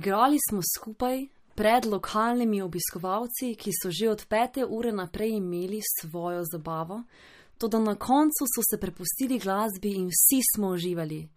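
Across the whole recording the speech has a watery, swirling quality, with metallic chirps clinging to s sounds and consonant attacks smeared. Nothing is heard above about 15.2 kHz. This is likely MP3 compression at a low bitrate, around 48 kbps. With too few bits, the encoder cuts off the treble at a fixed point and drops weak frequency lines that flicker on and off between frames, plainly audible here.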